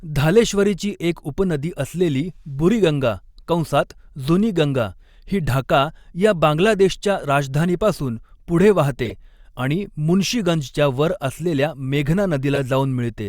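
Short chirps and bursts of noise cut through the speech three times: from 9.05 to 9.13 s, after "या बांगलादेशच्या राजधानीपासून पुढे" and before "आणि मुन्शीगंजच्या"; from 11.35 to 11.41 s, fainter; and from 12.55 to 12.60 s, loudest, peaking near about -5 dBFS. Each is a corrupt frame decoded: flipped bits in a few compressed frames were played anyway, so misread gains and codes scattered energy to the wrong frequencies.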